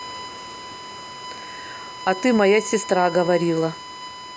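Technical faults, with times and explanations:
Throughout: USB whine, a steady fixed-pitch tone at 1 kHz sitting roughly 15 dB below the speech, from the bus's 1 ms frame current leaking into the audio through power or ground; a spectrogram shows a thin, unbroken horizontal line at 1 kHz beneath the speech.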